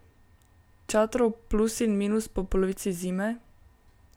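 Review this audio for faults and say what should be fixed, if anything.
No faults; nothing needs fixing.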